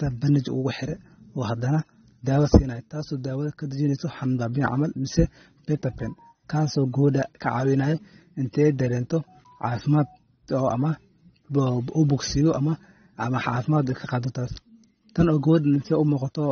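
Throughout, the speech sounds dull and warbling, with nothing above 6.3 kHz. This is likely AAC compression, and the damage fits a bitrate near 24 kbps.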